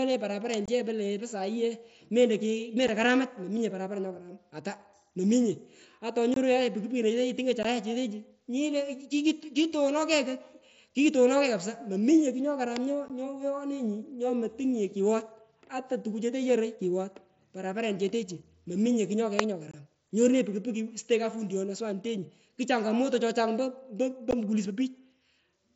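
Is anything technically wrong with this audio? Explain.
Yes. The speech has two kinds of fault.

An electrical switching spike appears three times: at 0.54 s, at 12.76 s, and at 19.39 s just after "parapareniche techu mominye kugh". Each is a sharp snap or tight cluster of clicks lasting only a few milliseconds, laid over the speech rather than replacing it. The likely cause is a nearby switch, motor or static discharge arcing briefly, with the wiring or the audio line picking up the burst as an impulse.

Unconcealed Bluetooth headset packet loss shows up as seven short, hard-edged holes: 0.66–0.68 s, 2.88 s, 6.34–6.37 s, 7.63–7.65 s, 13.08–13.10 s, 19.71–19.74 s and 24.31–24.33 s. The gaps run 7.5, 15 or 22.5 ms, which fits one to three lost 7.5 ms headset frames. The receiver drops nothing in to cover them, so the speech cuts out abruptly and each edge can click. The wideband mSBC link itself carries speech up to 8 kHz with its usual light graininess.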